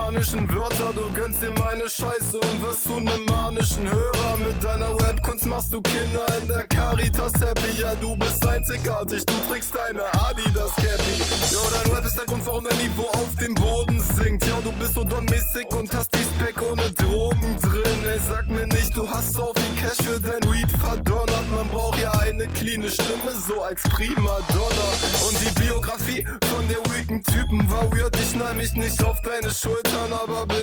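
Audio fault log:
Nothing to log here, as I didn't hear anything go wrong anywhere in this audio.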